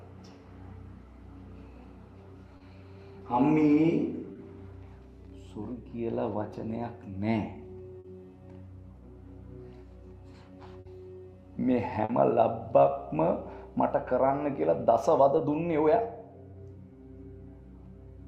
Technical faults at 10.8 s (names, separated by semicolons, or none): burst of packet loss